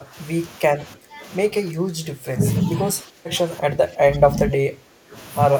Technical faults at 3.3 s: speech suppressed in double talk

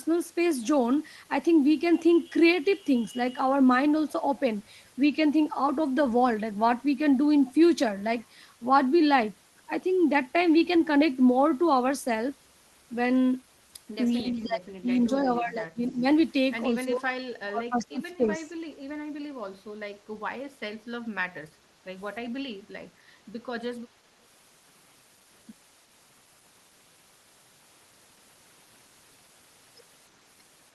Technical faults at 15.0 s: echo leak

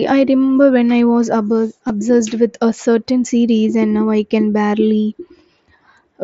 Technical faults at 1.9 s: concealed Bluetooth headset packet loss

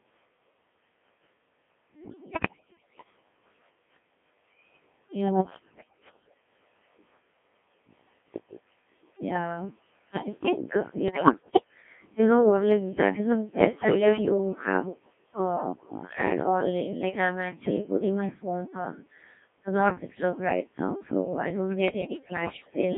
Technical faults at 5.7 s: Codec 2 vocoder; bit errors on digital voice radio

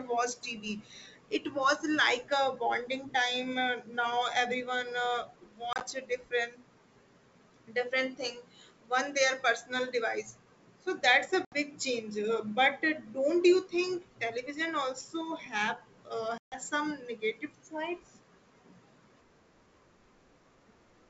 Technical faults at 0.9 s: none

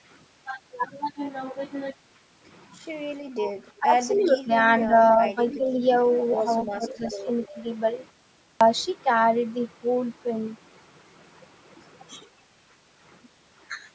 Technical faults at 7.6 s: echo leak

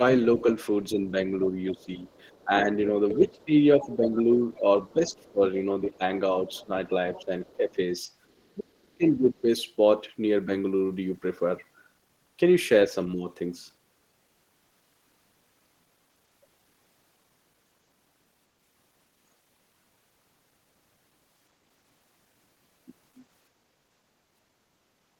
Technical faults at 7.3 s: speech suppressed in double talk; other side's voice leaking through

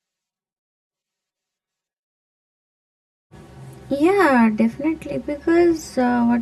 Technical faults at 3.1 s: channel delay (comb filtering)

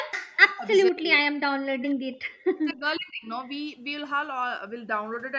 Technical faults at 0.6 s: speech suppressed in double talk

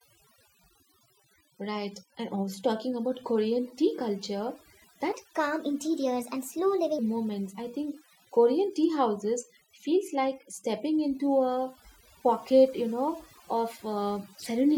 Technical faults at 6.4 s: overdone noise removal; section at the wrong speed

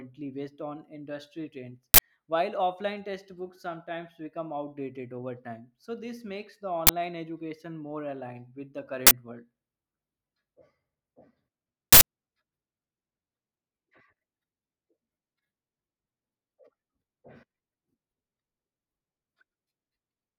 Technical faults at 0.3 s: none

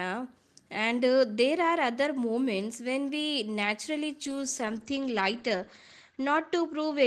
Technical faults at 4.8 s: call bitrate drop

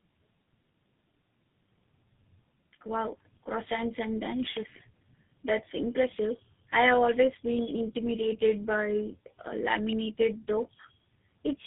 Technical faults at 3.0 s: tandem speech coding

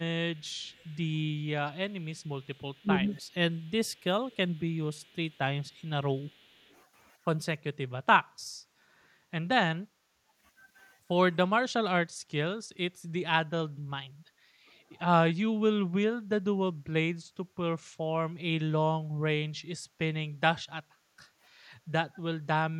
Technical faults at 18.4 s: none

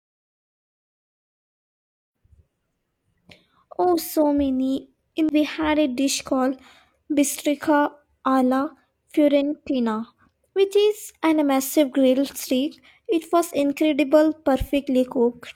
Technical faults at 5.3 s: damaged data in a compressed stream

